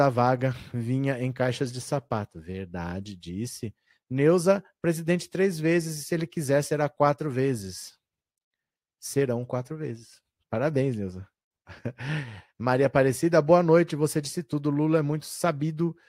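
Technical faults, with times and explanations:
No technical faults can be heard in this speech clip.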